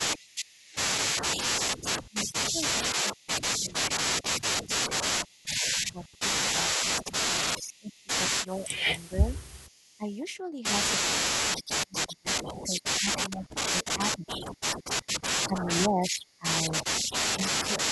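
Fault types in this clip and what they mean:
Echo leak: A faint, delayed copy of the speech trails it by about 421 ms at about 25 to 35 dB down, likely from a loudspeaker echo the canceller failed to remove. A spectrogram shows ghost harmonics offset in time; the waveform shows a low shadow envelope.
Speech suppressed in double talk: While both sides talk at once, the speech drops in pieces by up to about 25 dB, likely because the echo canceller treated it as echo. The waveform shows abrupt notches in the envelope; the spectrogram shows dimmed or blank stretches.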